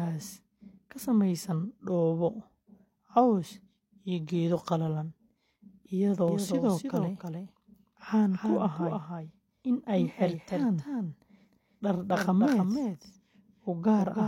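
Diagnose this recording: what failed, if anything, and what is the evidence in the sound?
From 6.28 s to the end there's a doubled audio track: a second, full-band copy of the speech trailing about a third of a second behind, a few dB quieter, with no room tail. It snaps in abruptly, which likely points to a second, slower capture path mixed in.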